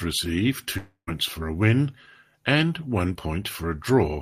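A long network dropout runs from 0.77 to 1.09 s. At 0.77 s the speech dissolves into a fading buzzy continuation of its last sound, which thins out to near-silence for about 100 ms. The audio then resumes with "for a win and", but roughly 300 ms of speech is simply gone. The likely cause is a stall in the incoming stream, with the receiver's concealment stretching the final sound until it gave up.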